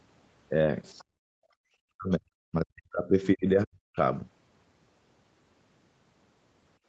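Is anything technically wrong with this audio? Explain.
Yes. Three related echo-canceller faults appear in the first four seconds of this speech clip.

From 0.98 to 1.04 s, the other side's voice leaks through. A faint second voice, about 30 dB below the talker, slips in. Likely cause: the far end played on a loudspeaker, and the echo canceller left a residue in the microphone signal.

From 1.04 to 1.51 s, the background is gated by the echo canceller. The room sound drops by about 30 dB for roughly half a second. The canceller clamped the microphone down while the loudspeaker played, then released it.

From 1.79 to 3.97 s, the talker's speech is suppressed in double talk. Over about one and a half seconds in total, the voice dips and breaks up, falling by around 40 dB at worst. Both ends were likely talking at once. The canceller mistook the talker for echo and pushed everything down.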